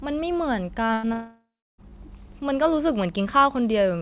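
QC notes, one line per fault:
0.86–0.91 s and 1.05–1.08 s, short concealed packet loss: about 40 ms and then 20 ms of audio never arrived in time. The decoder extended the preceding sound across each hole, giving a brief smear or wobble rather than an audible gap or fade.
0.93–1.05 s, burst of packet loss: about 100 ms went missing in a row. The held-over sound lasts long enough to become a buzz or hiss that dies away, and the speech picks up further along, not where it stopped.
1.13–1.91 s, long network dropout: about 0.66 s of audio is lost, likely from the network delivering nothing. The continued sound fades out, then roughly 0.32 s of silence follows before speech returns. That stretch of silence sets it apart from a burst, and the G.711 band limit at 4 kHz holds before and after the gap.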